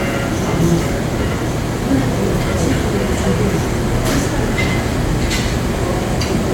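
No technical faults can be heard anywhere in this recording of sounds; the signal stays intact and continuous throughout.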